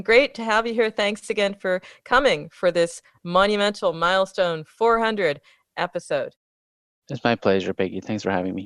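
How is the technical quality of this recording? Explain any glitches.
No glitches can be heard in this speech recording. In the pauses the background fades down to silence and comes back in time for the next sound, with only very quiet sound lost.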